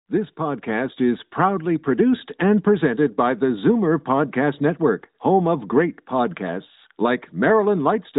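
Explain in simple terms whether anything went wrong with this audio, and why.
Nothing went wrong with this audio, as there are no faults to be heard anywhere in the speech.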